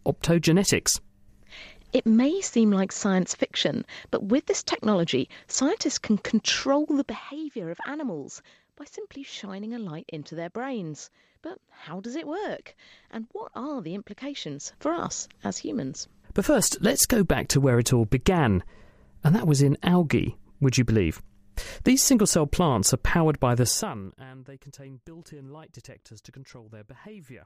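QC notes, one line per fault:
6.94–7.31 s, 14.35–15.0 s and 23.64–24.24 s: zipper noise. A fast ticking rides on the sound while the level drops after "technology scientists can control", rises by roughly 10 dB after "what are the", and falls by roughly 25 dB after "powered by the". Each gain change is applied in unsmoothed steps of about 1 dB or less, around 40 per second, and every step clicks.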